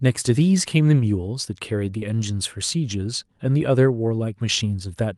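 At 1.99 to 2.03 s, about 20 ms of the speech never reached the decoder in time, a short concealed packet loss. The receiver covered the gap by extending the preceding sound, carrying its pitch forward where it was voiced or shaping noise where it was not, then blended back into the real signal. The result is a brief smear or wobble in the speech, heard through the call path's band limit near 12 kHz.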